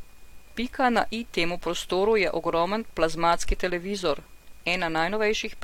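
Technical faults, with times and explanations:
1.12 s, damaged data in a compressed stream: a brief glitch as the decoder misreads corrupted frames and resyncs.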